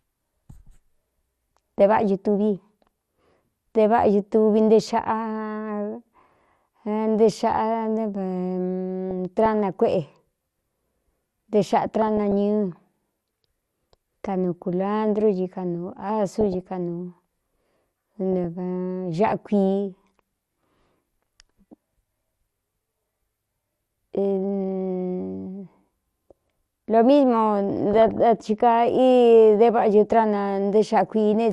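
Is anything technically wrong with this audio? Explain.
Yes, two things stand out.

Through the whole clip the speech sounds dull and a bit gurgly, with a grainy edge. That's likely MP2 compression at a low rate, something around 80 kbps. MPEG Layer II splits the signal into 32 sub-bands and shares out bits among them. When bits run short, the upper bands get switched off or flicker in and out, and whatever's left is quantised roughly. That's where the murky, granular texture comes from.

On top of that there are short bursts of DAB burbling at 9.11–9.46 s, 12.02–12.32 s, 16.41–16.61 s (right after "ci kanuu"), 18.33–18.45 s and 27.91–28.21 s. Each one is a brief burst of burbling over the speech. It's what weak DAB reception produces: bit errors, here a few tenths of a percent, slip past error correction into the MP2 data. Bad samples then put short blips of noise in single sub-bands, and bad scale factors make sub-bands jump in level for up to a frame.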